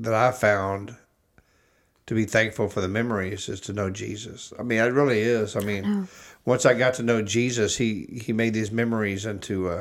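Listening through the speech, nothing stood out as a technical problem at any point.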